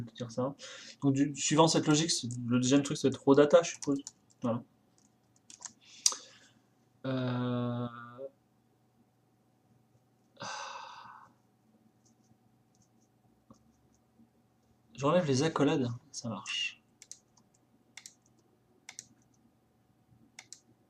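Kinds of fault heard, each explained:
No technical fault can be heard anywhere in the recording. Nothing in the sound points to a problem in how it was captured, processed or passed along.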